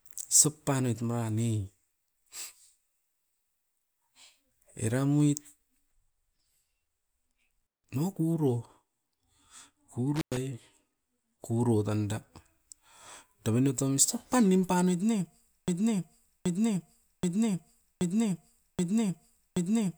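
Intermittent contact occurs twice, at 7.61 to 7.86 s and again at 10.16 to 10.37 s. Each time a loose cable or plug briefly loses its connection, so the signal path opens and the speech drops out, for about 0.17 s in the first event and about 0.10 s in the second. Crackle marks the break and the reconnection at either edge of each gap, and faint hiss remains while the line is open.

A broken-record loop begins at 15.68 s, right after "pan nimpanoit ne", and continues to the end of the clip. A 0.78 s fragment plays six times back to back, each repeat identical. This likely comes from the player, encoder or stream stalling and resending the last fragment it held. Whatever speech should have followed in those final seconds never arrives.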